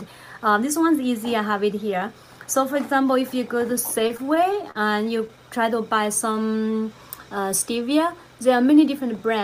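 Packets reached the receiver late or more slowly than they were played between 3.99 and 5.39 s, so the jitter buffer kept running dry. That produces repeated stalls (stutter): thirteen short holds where the last sound is stretched to cover the wait, the longest about 39 ms, adding up to roughly 160 ms of concealment, about a tenth of that stretch. Nothing is lost, but the audio drags and hiccups through that section.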